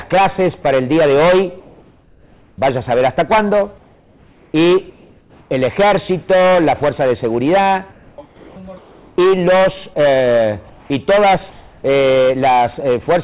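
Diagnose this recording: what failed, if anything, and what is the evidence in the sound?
Comfort noise in place of the background at 1.60 to 2.58 s, 3.78 to 4.54 s, 4.90 to 5.50 s and 11.50 to 11.84 s. In each pause the real background, about 30 to 36 dB below the loud passages, gives way to a steady, featureless hiss about 1 to 2 dB quieter. The call-processing stage likely applied discontinuous transmission: the sender went quiet and the receiver synthesised shaped noise until the sound resumed. The band stops at 4 kHz throughout, which fits a G.711 call path.

Sound chopped by the voice detector from 7.92 to 9.18 s. Across this stretch, quiet parts of the sound are clipped away and replaced by the smoother synthetic fill, nearly a second of it in total. The sender's voice detector likely toggled repeatedly, judging low-level material as silence. It cut transmission each time, and the receiver patched the gaps with comfort noise.

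Sound dropped by the voice detector at 9.94 to 9.96 s. A tiny slice of the sound, about 10 ms, vanishes into a brief stretch of steady noise before the signal returns. This is the same detection mechanism acting once: a quiet moment was likely taken for background, transmission stopped for about 20 ms, and the receiver's comfort noise stood in until the detector triggered again.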